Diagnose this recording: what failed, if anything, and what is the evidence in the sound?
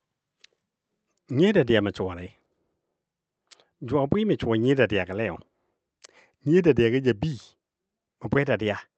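Nothing here failed: the speech sounds like an ordinary call, with the top end rolling off around 8 kHz, which fits an Opus stream at about 32 kbps, and there's nothing else in the sound worth chasing.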